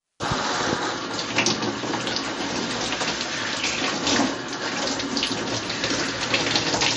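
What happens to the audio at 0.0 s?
From 0.0 s the sound carries plainly audible MP3 compression artefacts, likely from a starved encoder at a bitrate near 37 kbps. Nothing sits above 10.6 kHz, and weak frequency lines flicker on and off between frames. That watery swirl and smeared attacks separate it from a plain low-pass filter.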